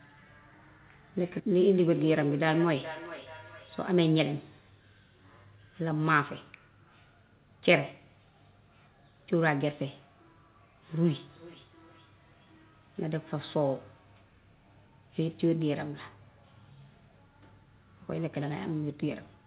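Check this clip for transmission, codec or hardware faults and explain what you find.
There's a feedback echo between two devices, showing up twice: from 1.59 to 3.94 s, peaking at about 15 dB below the speech, and again from 11.14 to 12.88 s, fainter at about 26 dB down. Each phrase comes back roughly every 400 ms, thinner and ringier each pass. One device is playing the call aloud and a second device's mic is picking it up and sending it back. The canceller only knows its own device's output, so it can't remove that loop. The audio itself tops out around 4 kHz, which fits a G.711 mu-law call at 64 kbps.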